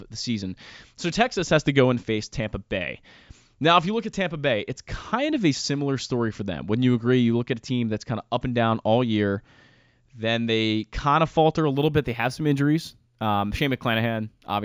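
From 11.72 s, after "kind of falter a", sibilants shimmer metallically. This is imaging from linear upsampling: straight-line interpolation leaves 8–16 kHz mirror images about 35 dB down.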